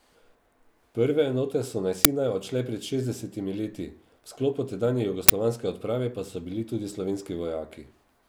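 At 2.05 s, between "enote so na" and "odšle pred šestdesetimi leti", an uninitialised buffer lets a short burst of digital noise through. A block was sent to playback before any audio was written to it, so stale memory played as samples. The burst lasts about 5.8 ms, which fits a 256-sample buffer. A second one at 5.29 s, after "sklopu tedanje" and before "odprave pa so bili", lasts about 11.6 ms, consistent with 512 samples. On a waveform each appears as a dense block with abrupt edges. On a spectrogram each is a sharp vertical broadband stripe.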